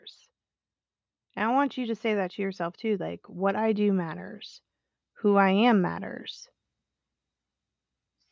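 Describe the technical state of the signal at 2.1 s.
At 2.1 s the signal is partway through an automatic gain rising episode, 1.33 to 4.28 s: the gain control raises level gradually by about 6 dB, swelling voice and background together.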